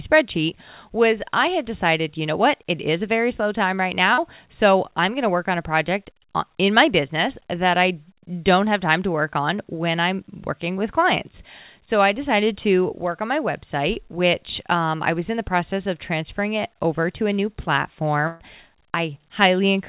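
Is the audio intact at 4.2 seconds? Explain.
No. Just after "very slow time right", from 4.14 to 4.19 s, there is a short concealed packet loss. About 40 ms of audio never arrived, and the receiver patched roughly 34 ms of it by extending the preceding sound before blending back into the real signal near 4.2 s. It is heard as a brief smear or wobble. On a spectrogram, inside a band that stops at 4 kHz as G.711 does, the patch continues the preceding sound across the gap.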